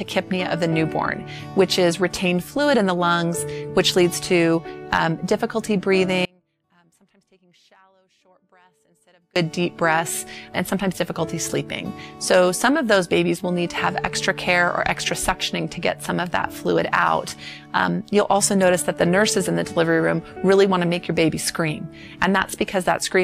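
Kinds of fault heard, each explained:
Audio dropout to a faint residue: from 6.25 to 9.36 s the sound abruptly drops to a faint leak far below normal level, likely a signal loss while the downstream path stayed live.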